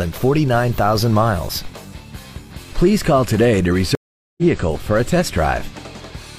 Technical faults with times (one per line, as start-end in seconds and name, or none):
3.95-4.42 stream reconnect